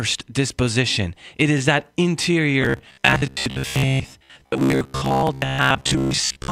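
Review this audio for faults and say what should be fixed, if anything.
From 2.62 s to the end of the clip, the speech collapses into a rigid, metallic buzz near 66.8 Hz that only loosely tracks the words. This is robotic sound from repeated short buffers. When fresh audio likely arrived too late, the last chunk of roughly 15 ms was replayed over and over, covering most of the real signal in that span. Prevent it with a larger jitter buffer and steadier audio scheduling so new data reaches the output before it runs dry.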